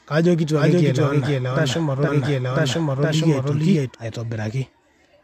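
From 0.57 to 3.95 s a doubled audio track appears: an equal-level copy trails about half a second behind, likely from a second, slower capture path, showing as repeated, offset waveform shapes.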